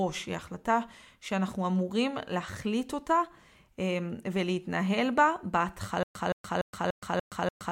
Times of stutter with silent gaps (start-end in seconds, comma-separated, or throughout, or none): 6.03-7.72